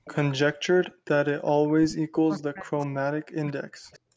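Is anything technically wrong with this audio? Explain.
Yes. This speech clip has two kinds of fault, both tied to a call's echo handling.

Echo leak appears from 0.05 to 0.34 s, 0.82 to 1.09 s, and 3.92 to 3.99 s. The far side's echo canceller likely failed to remove its loudspeaker pickup. So a faint delayed copy of the speech returns, about 215 ms late at first and 190 ms late near the end. It sits about 20 to 35 dB below the main level.

Speech suppressed in double talk runs from 1.77 to 4.06 s. With both sides talking, the echo canceller likely could not tell the local talker from echo and turned everything down. The speech dips across roughly two seconds, by as much as about 40 dB.

The call microphone processing's band limit, with nothing above 8 kHz, is normal.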